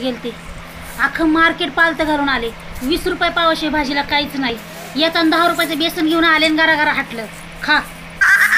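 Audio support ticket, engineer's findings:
Periodic USB or driver dropouts, 6.00 to 8.50 s. Regular ticks every 0.5 s, audible only over signal. Each gap a fraction of a millisecond, filled with silence. Probable cause: background task stalling USB bus or audio driver at fixed interval.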